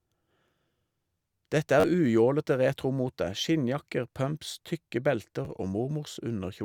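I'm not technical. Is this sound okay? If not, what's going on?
No. There's a repeated buffer at 1.80 to 1.84 s and again at 5.45 s. The audio arrived late, so the player replayed its last tiny slice. The speech stutters three extra times at first, then briefly clicks once, dropping a few hundredths of a second.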